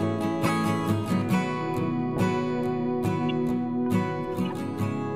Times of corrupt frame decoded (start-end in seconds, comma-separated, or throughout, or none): 0.45-0.49, 3.29-3.32, 4.45-4.52